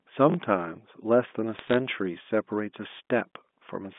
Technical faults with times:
0.30-0.34 chunks out of order
1.56-1.76 bit errors on a digital phone line

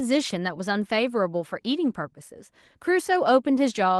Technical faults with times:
none

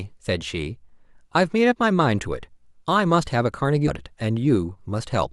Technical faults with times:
3.87-3.91 stream segment skipped

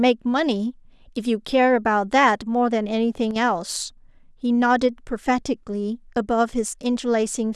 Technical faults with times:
3.31-3.36 one channel drops out

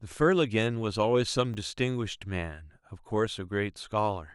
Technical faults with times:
1.54 repeated buffer

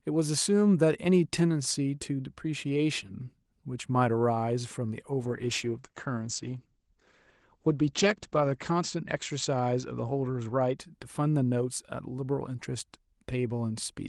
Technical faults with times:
5.20-10.83 call bitrate drop

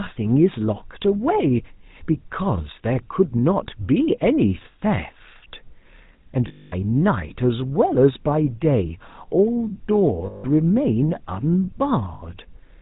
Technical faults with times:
0.00-12.82 GSM full-rate codec
4.72 lost GSM frames
6.48-6.74 lost GSM frames
10.26-10.45 lost GSM frames
12.14-12.21 lost GSM frames

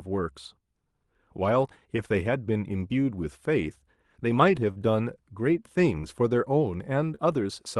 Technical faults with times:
1.96 short concealed packet loss
4.71-4.76 short concealed packet loss
6.01-6.04 short concealed packet loss
7.15-7.19 short concealed packet loss

